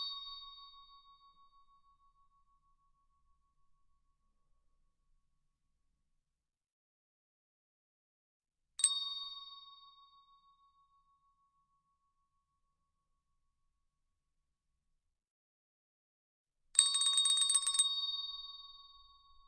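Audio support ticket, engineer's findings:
No faults found on listening, so nothing here needs chasing or escalating.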